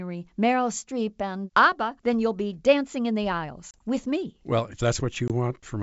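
At 3.71 s, between "be dancing in the" and "with me", a hard-edged 30 ms hole opens, then a 20 ms one at 5.28 s. This is packet loss on an ADPCM call: dropped packets are replaced by silence, and the decoder's predictor and step size lose step with the sender's.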